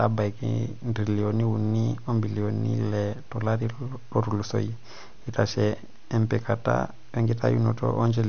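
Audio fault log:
Throughout: MP3 compression. The speech has nothing above 6.5 kHz, and weak detail flickers on and off with a watery, swirly quality and smeared consonants, likely from a starved MP3 encoder at around 48 kbps. That flicker sets it apart from a plain low-pass filter.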